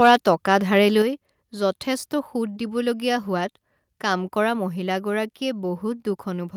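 Microphone overload from 0.02 to 0.29 s: the loudest peaks of the speech are flattened, adding a harsh, crackling edge. The input level likely ran about 4 dB past the converter's limit, so a small share of samples had their tops cut off.

Microphone volume stepped down at 1.02 s: the speech and the background fall together by about 5 dB in one sudden step. The cause is likely the call software reacting to the earlier overload by lowering the device's input volume at once rather than gradually.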